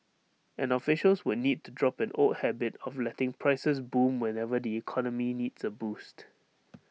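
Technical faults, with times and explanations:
Nothing technical goes wrong anywhere in this bit of speech, so there's no fault to list.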